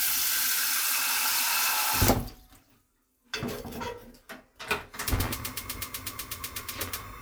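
Everyday sounds, with no technical fault to report anywhere in the recording.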